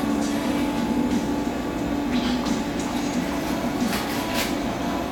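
No technical faults are audible.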